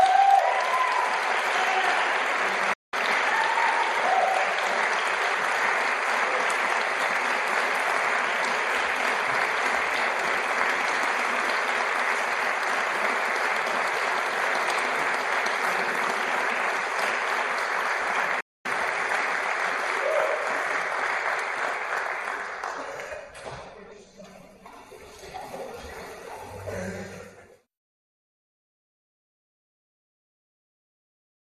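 Digital broadcast dropouts occur at 2.73 to 2.94 s and again at 18.40 to 18.66 s. Each time the receiver stopped getting valid frames and muted itself. The audio fades out over about 8 ms into silence, and the programme resumes further along. About 190 ms of material is missing in the first gap and about 240 ms in the second, which fits roughly eight and ten lost frames.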